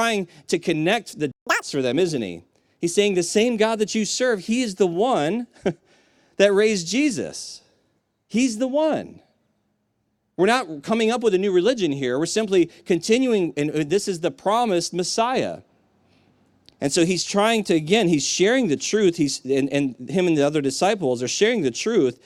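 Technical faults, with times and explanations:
1.32–1.47 s, playback stall: the speech cuts to silence for about 150 ms mid-flow. The player likely ran out of buffered data before resuming.
1.47–1.62 s, catch-up at higher speed: the backlog plays at double speed, so pitch jumps about ten semitones. It then settles back to normal.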